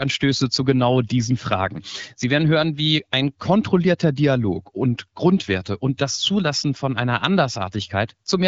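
No technical faults are audible.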